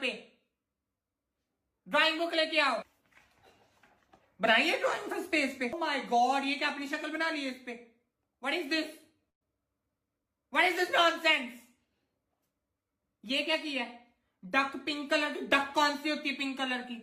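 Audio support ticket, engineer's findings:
Burst of packet loss, 9.29 to 9.43 s. About 120 ms of audio missing. The receiver covered the gap for roughly 112 ms by extending the last received sound and fading it down, heard as a held, dying tail near silence. Playback resumes further along, with that section skipped. Probable component: network transport or jitter buffer, with several consecutive packets dropped or arriving past their playout deadline. Concealment then ran out.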